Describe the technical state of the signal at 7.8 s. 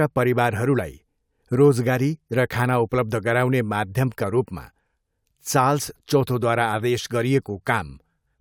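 At 7.8 s the speech signal is intact, with no audible dropout, distortion, clipping or other technical fault.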